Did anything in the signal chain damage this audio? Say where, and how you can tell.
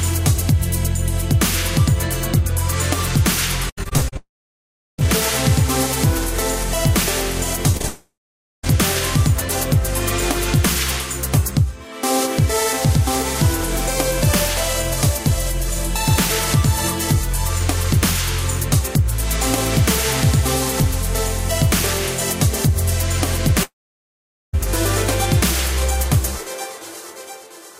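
Yes. Between 3.69 and 5.10 s the network path shows repeated packet loss (robotic sound): ten holes, the longest 77 ms, each patched by stretching the preceding sound. Concealment covers 17% of that span, so the sound turns choppy. That density is what separates it from scattered gaps.

Three stretches go quiet after a brief fading buzz: 4.17 to 5.0 s, 7.87 to 8.65 s and 23.63 to 24.55 s, with about 0.72, 0.49 and 0.81 s of near-silence. The sound then resumes with that portion gone. The likely cause is a long network dropout, since concealment gives out instead of chopping.

From 7.72 to 8.67 s there are scattered short gaps, roughly four of them and up to about 30 ms each. They are heard as brief ticks and smears while the sound stays mostly clear. They are too sparse to turn robotic and too short to fall silent.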